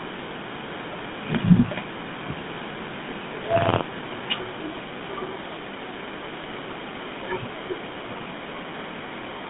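Speech heard through the GSM full-rate codec, which is plainly audible across the whole clip: the voice has a buzzy, gravelly roughness from the pulse-driven vocal-tract model, and the band is limited to roughly 150 Hz to 3.6 kHz, consistent with the 13 kbps full-rate coder. From 3.14 s to 3.94 s there is buffer tearing. The writer and reader of the playback ring buffer have slipped so that, in each period, a small slice of the audio, around a twentieth, comes from one lap earlier, about 50 ms old, with hard joins on either side. This produces a robotic buzz at 86.1 Hz, which fits a 512-sample buffer.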